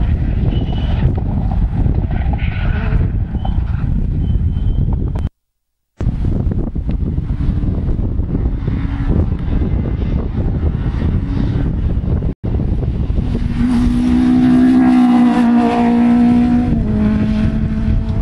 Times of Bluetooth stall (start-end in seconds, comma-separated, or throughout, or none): 12.33-12.44